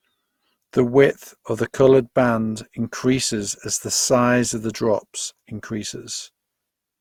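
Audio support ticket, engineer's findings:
Generation loss, throughout the speech. Swirly, hollow texture, smeared consonant attacks, heavier than one Opus pass at 64 kbit/s would leave. Likely repeated lossy re-encoding, about five passes, each requantising on a shifted frame grid so noise and spectral holes stack. Unlike a single low-bitrate encode, bandwidth stays full, with content up to 20.2 kHz; the damage is accumulated smear, not a lowered cutoff.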